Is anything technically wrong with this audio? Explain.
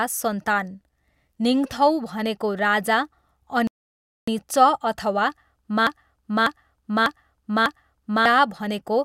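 Yes, two faults interrupt this speech.

From 3.67 to 4.28 s the speech drops to dead silence, then picks up exactly where it stopped, with nothing missing but about 0.6 s added. This is a rebuffering stall: the player ran out of downloaded audio and paused until more arrived.

From 5.87 to 8.26 s a fragment of about 0.6 s plays four times back to back, identical each pass, and the speech meant for that span never arrives. This broken-record loop likely comes from a stalled player, encoder or stream resending its last fragment.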